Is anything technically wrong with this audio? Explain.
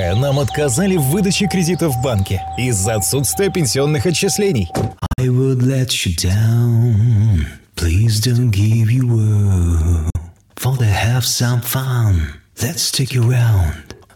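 Yes. There are two Bluetooth dropouts. From 4.99 to 5.20 s the sound cuts out in several short gaps spread over about 190 ms, totalling about 116 ms, the longest about 46 ms. At 10.10 to 10.16 s about 46 ms of sound is lost. The likely cause is packets arriving too late for the headphones and being discarded. Each time the sound resumes as though it had kept playing.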